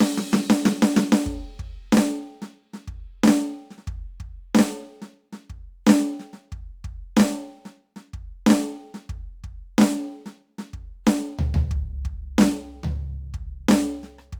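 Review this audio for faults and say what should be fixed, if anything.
Sample clock jitter runs through the whole music clip. The converter's clock wanders by roughly 5 microseconds, so each sample is captured slightly early or late, and the resulting error scales with how fast the waveform is moving. That error sits at roughly 30 dB below the music, heard as a grainy hiss that thickens on loud, bright passages and disappears in quiet gaps. Prevent it by clocking the converter from a stable, low-jitter reference.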